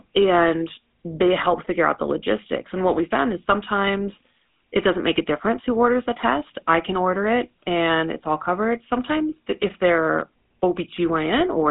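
Throughout, the speech carries GSM full-rate codec damage: a buzzy, gravelly roughness from pulse-driven vocal-tract coding, consistent with 13 kbps, with nothing above 3.8 kHz.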